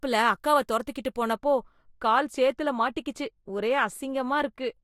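De-emphasis applied wrongly, from 1.33 s to the end of the clip at 4.83 s, just after "அக்காவ துரத்திகிட்டு". A treble-cut filter meant to reverse pre-emphasis has been applied to speech that either never had that boost or had already been corrected, so the highs are cut without anything to cancel out. The response slopes smoothly downward, reaching about 13 dB below 1 kHz at 10 kHz, and the speech sounds dull and muffled from that point on.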